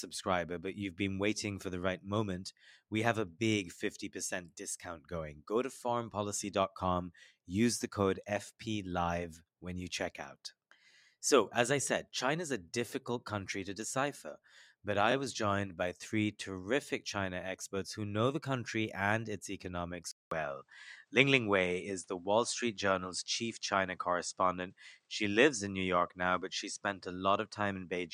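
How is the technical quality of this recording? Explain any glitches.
The recording has three glitches: two short stutters and one change in tone partway through.

Repeated frames occur at 15.10 to 15.12 s and at 25.02 to 25.07 s. A 21.3 ms block, then a 42.7 ms block, replays once, which points to one and then two compressed frames being duplicated. Each repeat is heard as a tiny stutter and shows on the waveform as an identical copied segment.

An input switched to a poorer device, likely, at 20.11 s. After a 200 ms gap of silence, the sound turns duller through to the end. On a spectrogram there is nothing above 9.8 kHz, there is a faint new noise floor, and the level barely changes.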